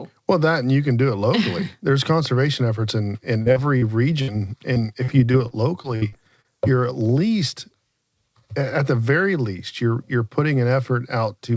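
Short concealed packet loss occurs three times, at 3.42 to 3.48 s, 3.52 to 3.58 s and 3.78 to 3.84 s. Each time about 40 ms of speech arrived too late, and the receiver bridged the hole by extending the preceding sound, leaving a brief smear or wobble.

A burst of packet loss follows at 4.22 to 4.30 s. About 60 ms went missing in a row. The decoder stretched the last sound and faded it, giving a short held buzz or hiss before the speech resumes slightly further on.

Repeated packet loss with a robotic sound runs from 4.74 to 6.46 s. Eight separate gaps remove about 240 ms in total, the longest about 60 ms, so roughly a seventh of that stretch is patched-in sound. Each patch comes soon after the previous one, producing choppy speech with fragments missing. Throughout the clip the audio stops at 8 kHz, which fits a wideband call codec such as G.722.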